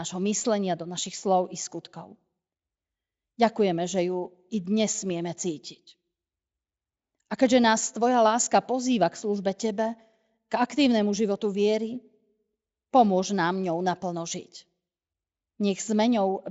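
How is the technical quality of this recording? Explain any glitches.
The recording has no glitches to report: it comes through a Speex speech link that sounds like it is running at one of its higher settings, and whatever coding traces it leaves on the speech are faint at most.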